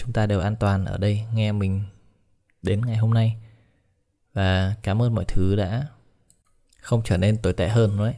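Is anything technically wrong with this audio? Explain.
No, nothing is technically wrong with this audio.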